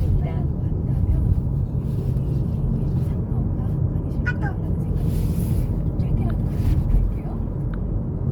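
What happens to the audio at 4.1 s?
At 4.1 s the audio is still under the Opus compression that runs through the whole clip, likely from an encoder in its music (CELT) mode starved of bits, which fits a rate near 24 kbps. Band energies hold, but detail that doesn't fit is filled by copying lower bands or noise, so the sound comes out plainly grainy and rough, with tonal parts turned noisy. The bandwidth stays full, reaching about 20.2 kHz, so it doesn't sound muffled.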